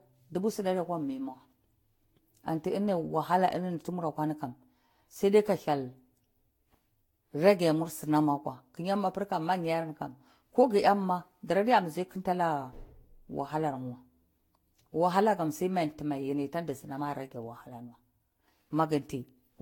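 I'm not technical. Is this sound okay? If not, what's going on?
No. Throughout the speech there is generation loss: a swirly, hollow, smeared quality with softened consonant starts. It is likely from being compressed and re-saved around seven times, and it sounds worse than a single low-quality save, because each pass adds fresh damage.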